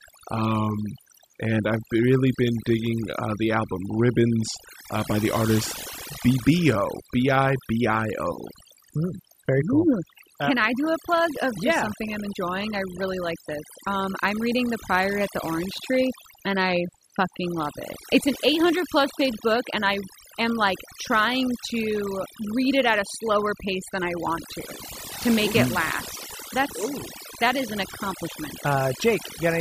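From start to finish, this speech has overdone noise removal: the denoiser was pushed too hard, so any frequency band sitting near its noise estimate gets slammed down. Gaps drop to near silence with twinkly specks, and quiet parts of the voice get cut away with them.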